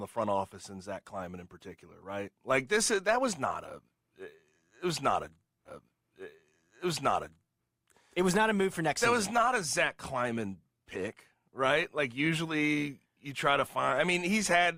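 Speech clip in which, at 5.64 s just after "it was not a", two seconds of audio replay up to 7.64 s, returning to "it was not a" again: a stream segment repeated, the player queuing the same segment twice.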